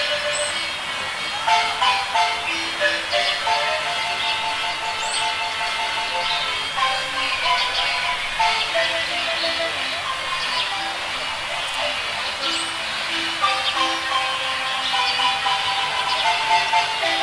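Nothing stood out as a technical problem on listening to this clip.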